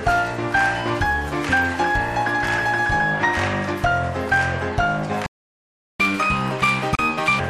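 At 5.26 s the sound stops dead and stays silent until 6.00 s, a playback stall of about 730 ms. It is likely that the player ran out of buffered data or its output thread was blocked, leaving nothing to send to the output until it recovered.

From 6.00 s to 7.40 s the audio resumes as catch-up at higher speed. The player resamples its backlog at 1.5 times normal rate, so the sound runs fast and sits roughly seven semitones sharp. It then drops back to normal speed and pitch.

Inside that fast stretch, from 6.95 s to 6.99 s, a gap at a join of encoded pieces opens. It is a gap of about 36 ms with smeared edges, left where separately encoded segments were butted together without trimming the encoder delay and end padding.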